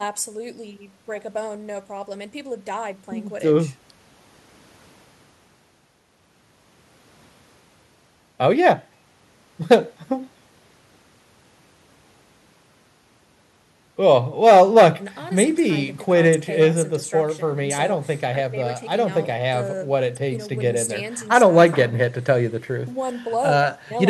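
No technical faults can be heard at any point in the speech recording.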